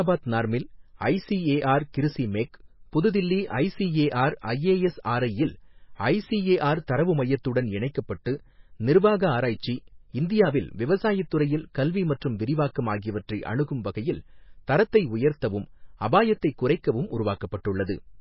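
MP3 compression throughout: heavy damage, likely a bit-starved encoder near 18 kbps cutting everything above 5.5 kHz and dropping weak bands, leaving watery, swirling speech.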